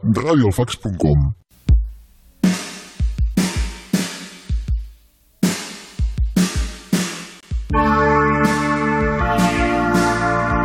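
At 7.41 s the sound drops out abruptly and returns at 7.43 s, a hard-edged hole of silence about 23 ms long. This is a gap between stream segments: the timestamps of two adjoining segments don't meet, so the player plays silence until the next segment begins. Nothing is missing from the audio itself. The silence is inserted, adding roughly 23 ms to the running time, and everything after the hole arrives that much later.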